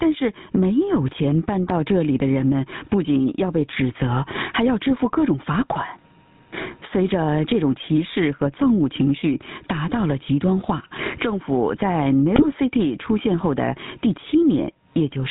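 Throughout the speech, the loud and quiet passages sit unnaturally close in level, with a flattened, squashed feel. This is gain pumping, with the level swinging by around 15 dB. The likely cause is an input gain set far too high for the microphone, with a fast limiter or compressor clamping down on each loud sound and releasing in the gaps.

The whole recording also carries a buzzy, gravelly roughness and has nothing above 4 kHz, leaving the voice dull and boxy with plainly audible coding damage. That texture is the GSM full-rate codec, and the character fits its 13 kbps rate. It rebuilds speech from a vocal-tract filter driven by a coarse, regularly spaced pulse train that keeps only one excitation sample in three, and that sparse excitation is what produces the grit.

From 12.36 to 12.45 s the voice briefly breaks into a squawking, gargled burst with sudden jumps in level. These are GSM bit errors: corrupted bits reached the decoder and scrambled its filter, pitch and gain values, bending the spectrum and throwing the level around. 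The 90 ms span fits about four damaged 20 ms frames.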